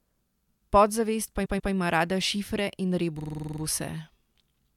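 At 1.44 s there are repeated frames: a 139.3 ms chunk, which fits about six compressed frames, plays twice more before "ima rada šifre", giving a stutter. From 3.18 to 3.60 s a 46.4 ms chunk loops nine extra times, a fast stammer that adds 0.42 s.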